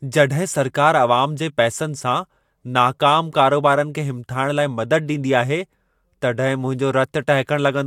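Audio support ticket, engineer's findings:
No technical faults found on listening to the speech recording. Nothing audible points to a failing component or a broken stage in the chain.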